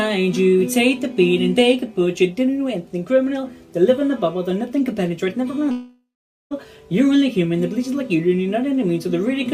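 From 5.71 s to 6.54 s there is a long network dropout, likely caused by audio failing to arrive for about 0.8 s. The receiver stretches the last sound into a fading buzz, then leaves about 0.46 s of silence before the audio resumes with that stretch missing. The smeared tail, the gap and the lost material set it apart from a brief packet-loss glitch or a plain mute, which would drop nothing.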